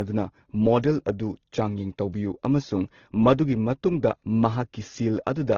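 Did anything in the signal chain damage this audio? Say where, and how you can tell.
Yes. Transcoding between lossy codecs, at the codec stage, runs throughout the speech. Two kinds of compression artefact sit on top of each other, with nothing above 18.5 kHz. This is likely an AAC encode near 32 kbit/s re-encoded to Opus around 16 kbit/s, the second codec spending bits on the first one's damage.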